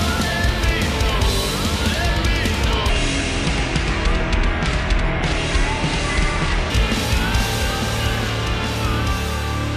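From the start there's a doubled audio track: a second full-band copy trails the original by about a second and a half, around 5 dB quieter, with no decay or room colour. It's likely a second capture through a slower path, or an edit holding two copies out of step.

From 2.89 s to 6.7 s there's a section at the wrong speed, running at 0.699 times normal, so everything drops about seven semitones and drags. It's likely that stretch was played against the wrong clock, since pitch and tempo shift together.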